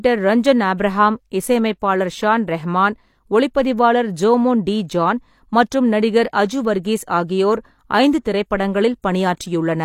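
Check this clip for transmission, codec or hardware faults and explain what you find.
One codec fault is present: pre-echo at 6.83 s. A transform codec spread its quantisation noise across an entire block, and because a sharp speech onset sat near the end of that block, noise scaled for the loud attack also filled the near-silent stretch just ahead of it. The result is a short burst of hiss about 17 ms long arriving before the onset, which blunts and smears the attack instead of letting it start cleanly.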